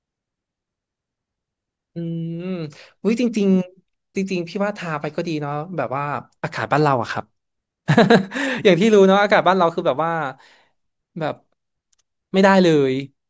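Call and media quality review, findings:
No faults found on listening; nothing to report.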